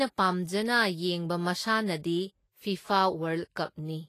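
From start to finish the speech has plainly audible codec damage, with nothing above 14.2 kHz. This is likely Vorbis compression, at a rate that fits roughly 32 kbps. The encoder coarsely quantises the treble residue over its smooth spectral floor, so fine detail turns into grainy, hiss-like noise of similar energy, and attacks blur. Broadband hiss would sit evenly under everything; here the grain follows the sound itself and ends at the cut-off.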